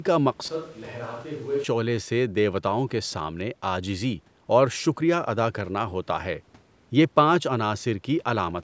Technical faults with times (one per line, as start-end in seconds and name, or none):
0.48-1.64 switch to a distant microphone